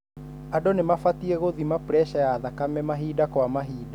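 No technical faults are audible.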